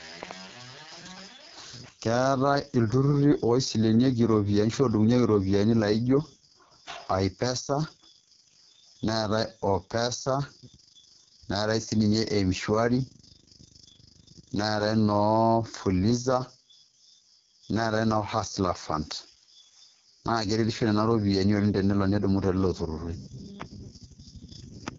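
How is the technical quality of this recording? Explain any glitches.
Quality is poor: the speech sounds rough and raspy from start to finish. Throughout, AMR wideband (HD Voice) codec damage is heavy, with nothing above about 7.1 kHz, which fits its lowest 6.6 kbit/s mode, where the pulse-based vocal model turns coarse and gritty.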